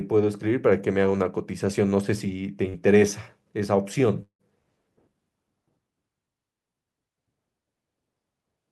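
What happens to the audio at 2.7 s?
At 2.69 s, a short concealed packet loss: roughly 40 ms of audio failed to reach the decoder in time, so the receiver filled the gap by extending the preceding sound, then blended back into the real signal by 2.88 s. This produces a brief smeared, wobbly patch.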